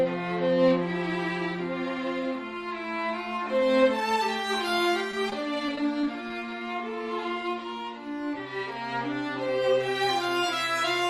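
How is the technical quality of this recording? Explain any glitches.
The recording has one glitch, repeated packet loss (robotic sound), between 5.11 and 6.31 s. Over that stretch eight short holes appear, none longer than 18 ms. Each is patched by stretching the preceding sound forward, covering about 8% of the span. The result is a choppy stutter with pieces missing. On a spectrogram, brief smeared or frozen columns recur through the stretch. On the waveform, small repeated segments interrupt the natural envelope.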